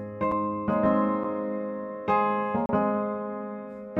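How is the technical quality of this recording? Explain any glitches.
The recording has three dropouts, each a block of digital silence. The output buffer likely wasn't filled in time, so zeros replaced the audio, cutting abruptly to silence and back. The gaps are about 6 ms at 0.31 s and 8 ms at 1.24 s, heard as ticks, and 32 ms from 2.66 to 2.69 s, heard as a short hole.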